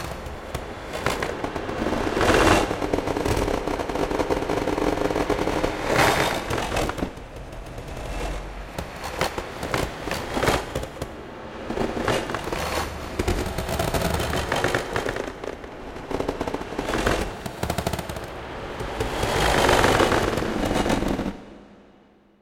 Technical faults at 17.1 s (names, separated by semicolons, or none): none